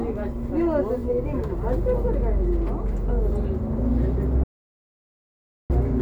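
At 4.44 s the sound cuts to total silence until 5.70 s, an audio dropout to silence likely from lost input; unlike a pause, even room tone vanishes.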